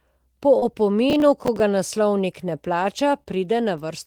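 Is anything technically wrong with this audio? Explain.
Yes. This speech clip has two kinds of fault.

Short concealed packet loss occurs twice, at about 0.59 to 0.63 s and 3.23 to 3.27 s. Each time, roughly 20 ms of audio arrived too late. The receiver patched the gap by extending the preceding sound, then blended back. It is heard as a brief smear or wobble.

Processor overload crackle runs from 1.1 to 1.6 s, ending just before "ga naslovnik ne". The processor missed around ten buffer deadlines, with buffers of about 10 ms each. Each miss replayed stale audio with hard edges. Together they make a gritty crackle over the speech.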